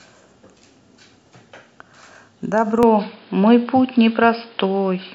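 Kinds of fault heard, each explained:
Input switched to a poorer device: From about 2.83 s the speech suddenly goes dull and boxy, with nothing left above 5.1 kHz, so the top end just vanishes with no gap at the changeover. The level shifts by roughly 5 dB and a new, fairly quiet noise appears well under the speech. That narrower band, different loudness and fresh background noise likely mean the recording moved mid-take to a lesser microphone or a headset's call mode.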